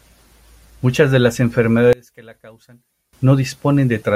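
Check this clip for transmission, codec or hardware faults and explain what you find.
One fault stands out. From 1.93 to 3.13 s, right after "de las", the speech drops by about 25 dB to a faint remnant, likely one channel inverted in polarity, so the shared centre cancels on mono summing. A spectrogram shows a broadband energy gap, and the waveform visibly collapses in amplitude.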